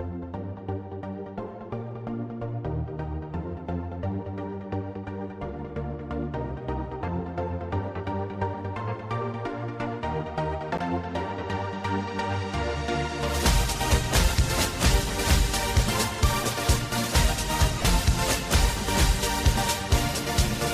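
At 10.77 s a CD skip gives a tick and a mute of a few milliseconds, then playback resumes elsewhere on the spiral. The clean jump in position sets it apart from a dropout. From 17.79 to 17.85 s, lost LE Audio frames, about 45 ms in short gaps of no more than about 20 ms, are filled by the decoder. It reuses the last spectrum with random signs, so tones smear into noise rather than falling silent as a plain dropout would. The light lossy compression underneath is barely audible.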